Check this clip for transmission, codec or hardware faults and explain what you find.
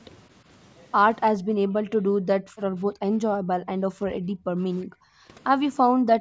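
The speech is repeatedly pulled down in level, in three stretches consistent with speech suppressed in double talk. From 1.35 to 4.63 s, 4.82 to 5.29 s, and 5.85 s to the end, the echo canceller likely mistook the talker for loudspeaker echo while the far side spoke and attenuated both. The talker sinks by roughly 25 to 30 dB, dipping and breaking up, with nothing above 8 kHz throughout from the call microphone processing.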